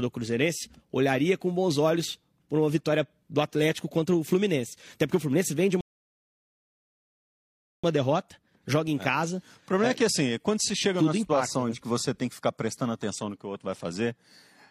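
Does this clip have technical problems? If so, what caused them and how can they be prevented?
Yes, there's one: a rebuffering stall. At 5.81 s the speech drops to dead silence and doesn't pick up again until 7.84 s, so there's about a 2.03 s hole. Nothing gets skipped. It resumes right where it left off, which tells you the player simply ran out of downloaded audio and sat waiting for more. The clip just gets longer. To prevent it, buffer more ahead of playback or use adaptive bitrate so slow connections don't drain the buffer.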